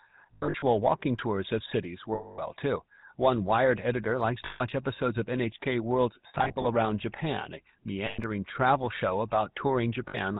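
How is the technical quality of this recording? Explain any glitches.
The recording is clearly degraded: it has passed through a low-rate mobile codec throughout and has several short dropouts.

GSM full-rate codec, throughout the clip. The damage is plainly audible and fits 13 kbps full-rate GSM. The codec models the vocal tract as a filter and excites it with evenly spaced pulses, keeping only one excitation sample in three. Nothing above 4 kHz gets through, so the speech sounds band-limited and muffled, with a buzzy, gravelly roughness.

Lost GSM frames, at 0.34 to 0.64 s, 2.14 to 2.41 s, 4.46 to 4.61 s, 6.28 to 6.65 s, 8.06 to 8.21 s and 10.08 to 10.17 s. In the first and fourth, about 180 ms is lost in pieces spread over 280 ms and 360 ms. The longest unbroken run in each is roughly 70 ms. The others are solid gaps of 240, 140, 120 and 60 ms. Each missing stretch is filled by repeating the last good frame's settings, so the sound hangs as a rough, metallic ring.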